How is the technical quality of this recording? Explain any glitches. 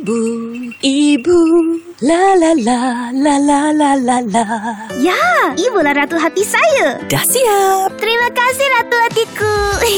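No glitches turn up anywhere in this recording. No working signal path is listed, so there is nothing further to describe beyond the absence of faults.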